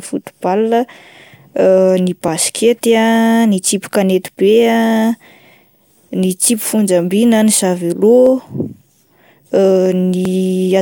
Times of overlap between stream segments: 4.28, 8.26, 10.25

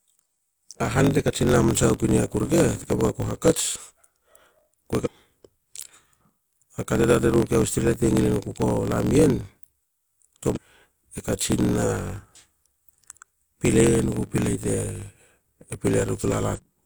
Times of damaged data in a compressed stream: 5.01-5.08, 10.52-10.58, 16.53-16.60

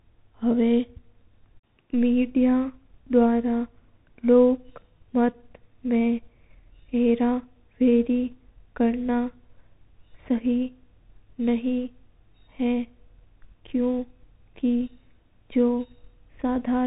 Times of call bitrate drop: none

